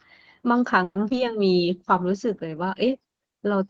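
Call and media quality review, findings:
Call audio freeze, 0.83 to 0.97 s. The sound stalls, then stretches into a fading buzz before about 40 ms of silence. Likely cause: packets held up in transit, jitter buffer ran dry. Playout concealed roughly 120 ms and resumed where it stopped. Nothing lost. Delay grows by 120 ms.

Short concealed packet loss, two back-to-back events at 1.09 and 1.12 s, each about 30 ms. Brief smear or wobble. Decoder received audio too late. Concealment extended the previous sound, then blended back. Some of each 30 ms window is gone, so a short consonant may drop out.

Call bitrate drop, 1.57 s to the end. Audio turns rough and muffled. Bandwidth estimate fell. The encoder went from 32 to 15 kbps and stayed at the low rate for about 1.4 s. Coarser Opus coding with reduced high-frequency content.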